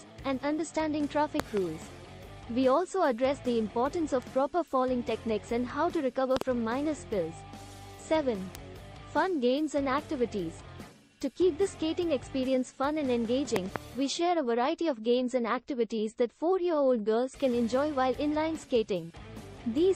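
At 1.40 s a voltage pulse, likely from a plug, switch or static discharge, enters the chain and is shaped by the following circuits. The result is a loud pop, a quick double thump about 20 dB above the sound, which continues underneath. At 4.22 s a flipped bit briefly knocks a sample value off by a power of two. This bit error spike is a single sharp broadband tick at about −28 dBFS, consistent with three corrupted samples. The same double loud pop returns at 6.37 s. A second bit error spike at 8.55 s is louder, about −15 dBFS, and fits a two-sample error. A final double loud pop comes at 13.56 s.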